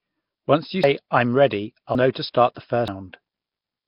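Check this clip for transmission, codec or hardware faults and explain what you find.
The clip has three faults: heavy codec damage throughout, three skips where audio was lost, and two smeared attacks.

Nellymoser compression, throughout: the damage points to a low-rate Flash-era Nellymoser Asao encode, likely around 22 kbps. Starved bands are filled with noise, leaving a hissy, underwater smear.

Dropped buffer (overrun), at 0.84 s, 1.95 s and 2.88 s: samples were likely overwritten before being read. Each point gives a jump forward, losing roughly a fifth, a tenth and three tenths of a second.

Pre-echo, at 2.13 to 2.15 s and at 2.55 s: coding noise sized for a late, sharp attack spreads back over its block. About 23 ms and 18 ms of hiss precede softened onsets.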